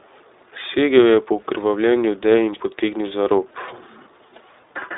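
It's a speech clip run through the iLBC codec from start to finish, and the codec damage is plainly audible. Everything sits in a narrow telephone band of roughly 300 Hz to 3.7 kHz, so there's no air up top. Each 20 ms frame gets coded on its own, and that leaves the voice sounding a bit rough and synthetic, which fits a rate around 15.2 kbps.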